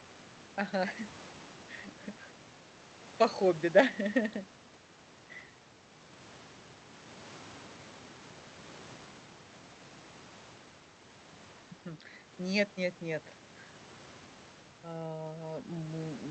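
A short stretch of speech that's come through an ordinary call path, with the top end rolling off around 8 kHz like a call codec does, and nothing in it that stands out as a technical problem.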